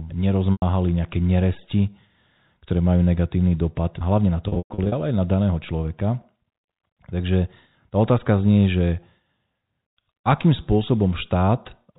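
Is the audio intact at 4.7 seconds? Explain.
No. Packet loss with pitch repetition runs from 4.48 to 4.92 s, just after "negatívny dopad hlavne na". About 280 ms goes missing, scattered over 440 ms. The last pitch period is looped into each gap, so it sounds buzzy and held. The longest 120 ms gap fades into silence.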